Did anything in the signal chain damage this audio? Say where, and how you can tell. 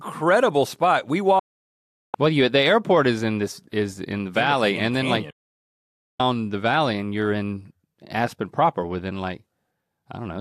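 Yes. A digital broadcast dropout occurs twice in this speech, from 1.39 to 2.15 s and from 5.30 to 6.20 s, the second falling between "in the and then" and "the valley and you're". In each hole the sound is muted abruptly, with a fade of only about 3 ms, for 0.74 s and then 0.89 s. That fits a receiver-stage failure in which a few dozen frames were lost or failed their checks, so the decoder muted until clean frames resumed and that stretch of the programme was lost.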